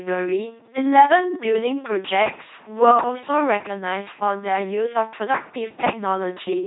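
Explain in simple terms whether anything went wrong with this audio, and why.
The speech has been passed through an LPC-10 vocoder for its whole length. Rather than keeping the real voice, it rebuilds each moment from a simple buzz or hiss shaped by a filter, so it sounds mechanical and robotic, with nothing above about 3.9 kHz.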